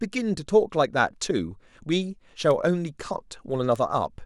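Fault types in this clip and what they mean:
Bit error spike: A single flipped bit in the digital data throws the sample value off by a power of two for an instant, then it snaps back. The speech carries two of these, at 2.51 s and 3.76 s. Each lasts only a few samples and reaches about -21 dBFS. Each is heard as one sharp, broadband tick. The ticks have no connection to the speech around them.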